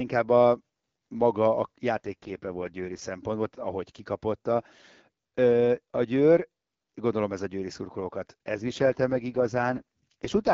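From 1.94 s to 3.02 s, the speech turns rough, buzzy and synthetic. The band stays as wide as before and nothing drops out. This is an AMR rate drop. The network pushed the wideband codec down to its low mode, shifting bits into error protection. The rasp points to a fall from 12.65 to 6.6 kbit/s. The clearer wideband sound returns at 3.02 s. The same roughness comes back at 8.58 s and lasts to the end.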